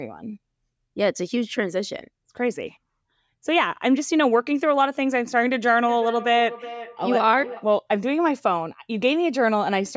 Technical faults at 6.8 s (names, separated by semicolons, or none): feedback echo between two devices